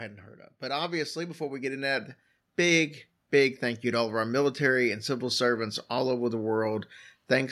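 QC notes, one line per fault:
0.6–4.27 s, automatic gain rising: just after "heard of", speech and background swell together by about 10 dB over about 3.7 seconds, leveling off by "military and civil servants". The gain control judged the input too quiet and raised its gain gradually.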